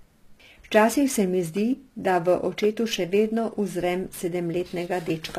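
Right from the start and all the way through, there's sample clock jitter: the converter's timing wobbles by something like 10 microseconds, so each sample lands a touch early or late. The error tracks how steep the waveform is, giving a rough hiss about 25 dB under the speech that swells on louder, brighter bits and drops away in the pauses.

Also running the whole length, the top end sounds synthetic. Sibilants come out gritty and a bit lispy, the treble doesn't sit right against the lower harmonics, and nothing is left above 14.9 kHz. That's likely HE-AAC compression at a low bitrate, around 24 kbps, rebuilding the highs from copied lower bands.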